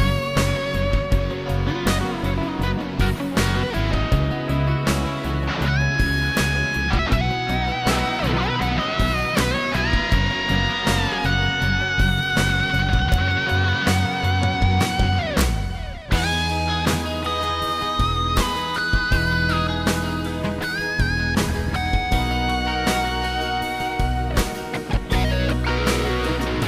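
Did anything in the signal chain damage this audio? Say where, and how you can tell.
Yes. There is integer overflow at a sample-format conversion or integer gain stage. Sharp, violent cracks occur at 1.87, 6.37, 9.39, 13.14, 18.37 and 24.40 s, with a slightly longer one from 15.39 to 15.41 s. The peaks were driven only to about 0 dB over full scale, but the arithmetic wrapped instead of saturating. Each excursion past the largest integer flipped to the opposite extreme, which produces a full-range jump far harsher than ordinary clipping.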